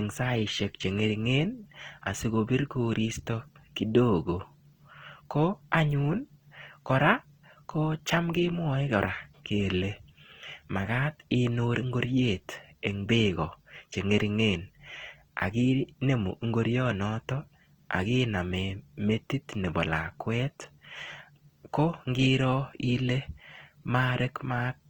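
Opus compression, most likely, runs from start to finish across the speech. The band energies are all preserved and content reaches up to about 20.2 kHz, but at this bit budget many bands are filled by folding lower ones or with noise rather than coded exactly. The damage is plainly audible: voiced sounds turn rough and grainy, with a noisy texture instead of swirling holes, which fits the music (CELT) mode at a low rate near 16 kbps.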